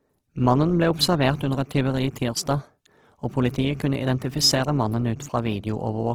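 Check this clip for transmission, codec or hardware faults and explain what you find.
One codec fault is audible, and it runs through the whole clip. The speech carries the marks of Opus compression. The damage is plainly audible: tones sound grainy, rough and noisy rather than swirly. The likely cause is Opus in its music (CELT) mode. It keeps each band's energy but fills starved bands with noise or folded copies of lower bands. Bandwidth stays full, reaching about 20.4 kHz. The roughness fits a low bitrate near 16 kbps.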